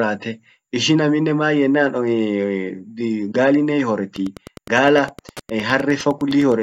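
From 4.07 s to the end, Wi-Fi interference: the audio circuit rectifies a nearby radio's beacon, sent every 102.4 ms, producing steady ticking about ten times a second, roughly 25 dB below the speech. A spectrogram shows evenly spaced thin vertical lines; the waveform shows regular small spikes.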